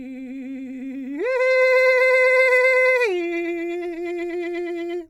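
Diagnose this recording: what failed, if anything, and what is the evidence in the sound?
Nothing in this music recording stood out as a fault on listening.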